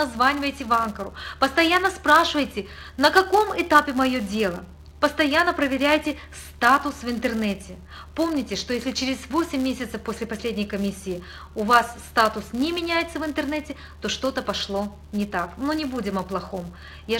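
From start to finish the audio carries a filter restarted on every block: the filter's memory is cleared at each block boundary, so every block starts from silence and opens with a small transient. These ticks repeat at 200 Hz, one every 5 ms, and merge into a steady buzz that rises and falls with the signal's level. A spectrogram shows a 200 Hz line with harmonics stacked above it, and the waveform shows evenly spaced glitches.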